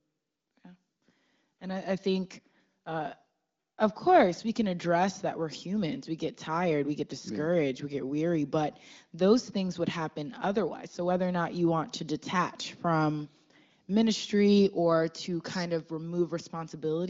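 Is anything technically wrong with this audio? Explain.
No, nothing is technically wrong.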